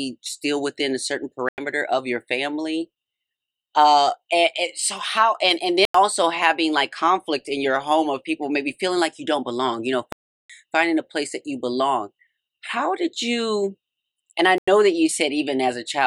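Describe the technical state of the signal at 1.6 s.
Right around 1.6 s the signal is just recovering from a hard dropout: a block of digital silence runs from 1.49 to 1.58 s, a short hole of about 93 ms where the sound cuts out and then snaps back. With no fade at either edge, the waveform jumps straight to and from zero. The block was most likely filled with zeros because the output buffer wasn't delivered in time. Its length fits a 4096-sample buffer.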